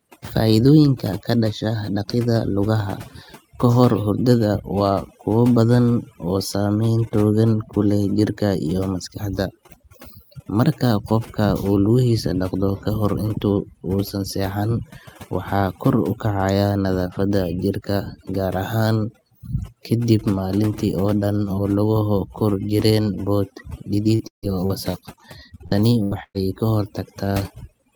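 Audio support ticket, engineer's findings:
Overdone noise removal, whole clip. Background pulled down and broken up into twinkling specks. Noise suppressor set too aggressive: bands near its noise estimate are cut hard or gated off, taking quiet speech detail with them. Probable component: denoise stage.

Short concealed packet loss at 24.15–24.22 s, 24.66–24.73 s and 25.67–25.74 s. Brief smear or wobble each time, about 40 ms of audio lost per event, roughly 30–45 ms synthesised. Decoder concealment extended the preceding sound (pitch-based if voiced, shaped noise if not) and crossfaded back. Short consonants may drop out. Component: jitter buffer / PLC.

Long network dropout, 24.27–24.45 s, likely cause. Audio stops for about 160 ms: concealment buzz or hiss fades out, then roughly 130 ms of silence before sound resumes further on with that stretch gone. Receiver had nothing to play and ran out of extrapolation. 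Component: transport path, receive side.

Burst of packet loss at 26.03–26.14 s (about 80 ms missing) and 26.23–26.37 s (about 120 ms missing). Consecutive packets lost or late; concealment held the last sound as a decaying buzz or hiss, with the second burst fading to about 60 ms of silence. Playback then jumps ahead, skipping the content in between. Component: network/jitter buffer.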